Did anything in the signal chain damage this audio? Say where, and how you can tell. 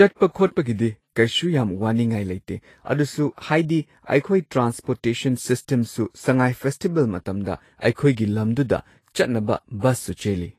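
Yes, at the codec stage. The whole speech clip has a grainy, hissy top end with roughened tones and smeared consonant attacks, which fits likely Vorbis compression at a low setting, around 32 kbps. The treble gets quantised so coarsely that its fine detail turns into noise.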